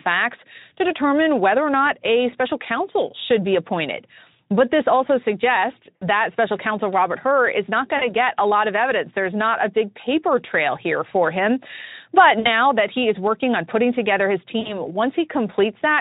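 Around 5.96–6.04, 7.97–8.11, 12.39–12.48 and 14.59–14.79 s there's VoIP packet loss concealed by the Speex decoder, which fills 40–60 ms gaps by stretching the last sound into a buzzy or noisy, fading smear.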